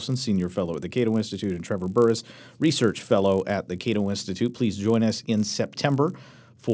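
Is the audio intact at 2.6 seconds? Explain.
No, at 2.6 seconds you're hearing the resampler restarted on every block, which runs through the whole clip. Each 20 ms block gets converted on its own, likely down from 44.1 kHz to 16 kHz, so every edge carries a small error, giving a 50 Hz buzz that rides along with the speech.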